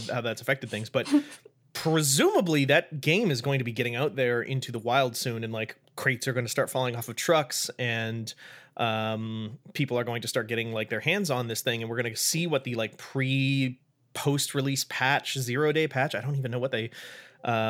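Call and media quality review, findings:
Call and media quality review findings: no faults found in this speech recording.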